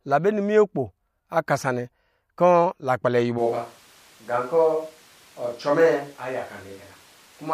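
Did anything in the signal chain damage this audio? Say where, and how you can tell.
Yes. From 3.40 s to the end, the speech abruptly turns roomy and hollow, with thinner bass and room noise about 30 dB down at unchanged level, likely a switch to a distant microphone.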